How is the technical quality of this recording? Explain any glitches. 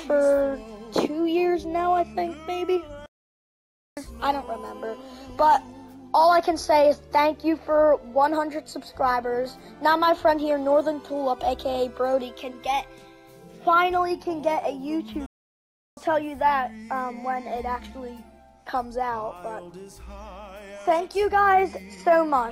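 Two playback stalls interrupt the audio. At 3.06 s the sound cuts to silence for about 0.91 s, and at 15.26 s it drops out again for about 0.71 s. The likely cause is the player running out of data or its thread being blocked, leaving the output silent until it recovered.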